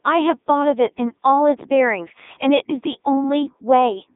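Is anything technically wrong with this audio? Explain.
Yes. Two faults are audible.

The whole clip has been through a Codec 2 vocoder. The decoder does not keep the original waveform. It rebuilds speech from sine waves, using only pitch, voicing, energy and a rough spectral envelope. Here the damage is heavy. The speech sounds robotic and buzzy throughout. The band is narrow, roughly 250 Hz to 3.7 kHz, with nothing above 3.8 kHz. The thin, smeared quality fits Codec 2 at its highest rate, 3.2 kbit/s.

From 1.61 to 1.85 s there is a loud pop, heard as two sharp pops in quick succession. They stand out around 10 dB above the speech, which continues underneath. A sudden voltage step or pulse has been added to the signal. Later circuits shape that pulse into a short, hard click. The likely source is a plug, a switch, static discharge or a driver glitch.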